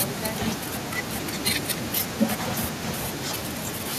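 An echo canceller, likely unable to separate the talker from loudspeaker echo while both sides spoke, causes speech suppressed in double talk in this speech clip: the voice drops by up to about 30 dB at 0.52–1.9 s, 2.25–2.31 s and 2.6–3.12 s.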